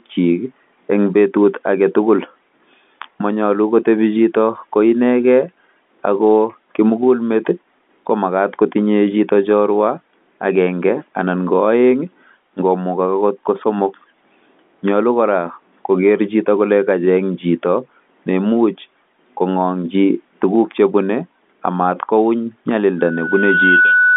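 Loudspeaker feedback squeal runs from 22.99 s to the end of the clip at 24.16 s. The microphone is picking up the loudspeaker it drives, and at 1.5 kHz the loop gain tops unity, so that frequency keeps feeding itself. It swells over roughly a second into a steady, piercing tone that climbs to about the level of the speech. Because it sits well inside the narrow telephone band, the line carries it through in full.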